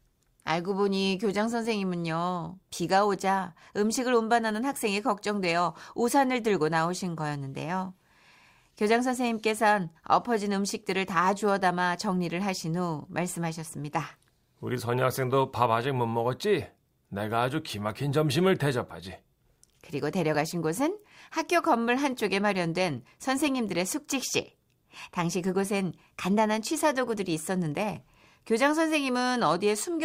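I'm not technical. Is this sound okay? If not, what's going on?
No. At 20.35 s the speech gives a tiny skip. This is an overlap between stream segments: a sliver of sound was trimmed where two chunks joined.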